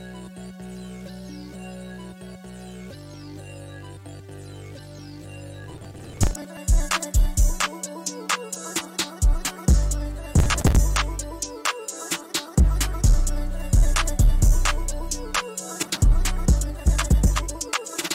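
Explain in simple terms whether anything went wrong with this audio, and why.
Processor overload crackle: the computer couldn't keep up, skipping dozens of tiny audio chunks (around 10 ms each), heard as crackling at 5.64–6.57, 10.34–10.76 and 15.83–16.02 s.

Time-stretched section: from 16.48 s to the end, the audio suddenly runs 1.85 times faster at unchanged pitch, likely squeezed by software, sounding rushed.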